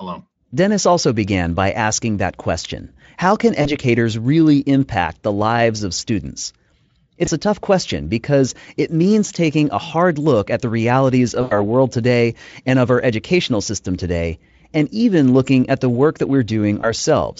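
Speech clip with VoIP packet loss concealed by the speech codec in four places: 3.61 to 3.72 s before "really impact the lives", 7.25 to 7.29 s before "a tough question because", 11.41 to 11.64 s, and 16.81 to 16.91 s after "at the work that". Each time the decoder stretches its last sound into a fading buzzy or noisy smear, with a gap of roughly 20 to 100 ms, the longest being the one at 11.4 s. The Speex coding carries the speech cleanly.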